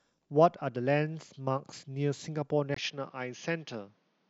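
From 2.74 s, after a 20 ms gap, the speech turns dull and slightly quieter, losing everything above 6.7 kHz: likely an input switched to a poorer device.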